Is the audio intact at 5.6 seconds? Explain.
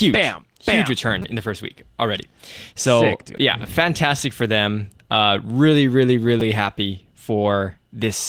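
Yes, at 5.6 seconds the speech is intact, carried through Opus voice compression at 20 kbps in hybrid mode with only light coding damage.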